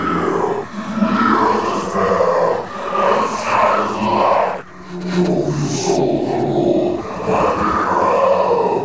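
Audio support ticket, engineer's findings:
No faults found in the clip. The call path shows as a bandwidth ceiling, with nothing above 8 kHz, which fits a wideband call codec such as G.722.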